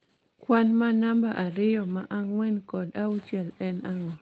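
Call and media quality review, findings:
Nothing stood out on listening to this speech clip carried over the call path.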